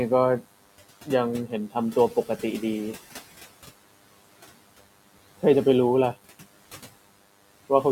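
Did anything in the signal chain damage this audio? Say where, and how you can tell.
Yes. In the analogue wiring, a DECT cordless phone buzz runs through the whole clip: a thin, harmonic-rich buzz at 100 Hz, roughly 20 dB below the speech. The audio circuit rectifies each radio burst, repeating every 10 ms. Unlike mains hum, it is buzzy rather than smooth.

In call processing, noise suppressor artifacts appear throughout. The background, which is room noise about 20 dB below the speech, is pulled down between phrases and rises under them. That frame-by-frame gain pumping distinguishes it from a simple noise gate.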